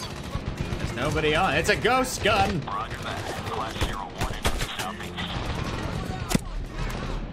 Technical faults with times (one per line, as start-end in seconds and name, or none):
none